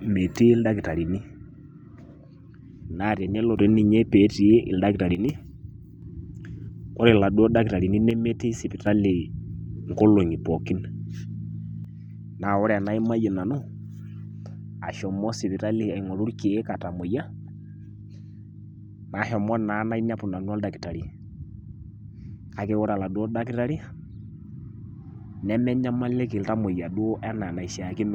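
Speech abruptly dips about 6 dB at 1.18–3.58 s, 5.15–6.02 s and 8.11–8.87 s, then stays down from 11.85 s on. That's likely one channel dropping out before the mono fold-down.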